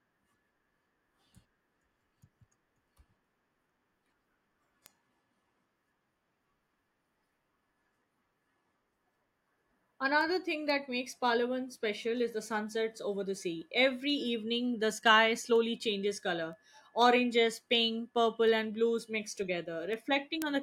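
A receiving device running on its own clock, unlocked from the sender's and drifting by roughly 50 ppm, drops or repeats a single sample at each slip. The speech carries word clock ticks, about forty of them, roughly every half second from 0.49 s to 20.42 s.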